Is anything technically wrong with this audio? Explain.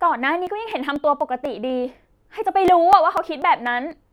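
Yes. From 0.22 s to 3.91 s the speech carries periodic USB or driver dropouts, repeating every 0.25 s, about fifteen in all. Something is stalling the USB bus or audio driver at a fixed interval, and each stall skips a few milliseconds of audio outright rather than filling the gap. Each skip joins the waveform with a discontinuity, heard as a tick or pop. Because the gaps fall on a steady grid, the ticks form a regular, clock-like pattern under the speech.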